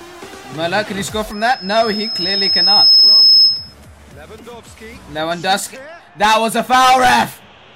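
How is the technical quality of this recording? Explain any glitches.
The recording is marred by one clear glitch.

Loudspeaker feedback squeal, from 1.32 s to 3.74 s. A microphone was picking up the loudspeaker it was feeding, and at 5.2 kHz the round-trip gain rose above one, so that frequency reinforced itself on every pass. The squeal starts faint and swells over about a second and a half into a piercing high whistle, peaking roughly 10 dB above the surrounding sound, before it stops at 3.74 s.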